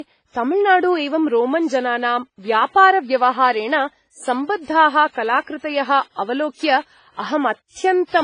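Throughout the speech, nothing sounds above 9.7 kHz, and two distinct kinds of codec artefacts overlap. This points to transcoding between lossy codecs, likely a low-bitrate WMA encode later re-encoded as AAC-LC, which compressed the first codec's artefacts and added its own.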